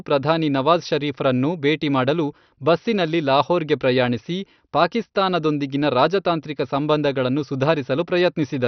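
Speech throughout shows MP2 compression, likely from heavy low-rate MPEG Layer II encoding, which fits roughly 48 kbps. Nothing survives above about 6.1 kHz, so it sounds dull, with gurgling granular distortion. A spectrogram would show a hard ceiling there and sub-band blocks flickering on and off.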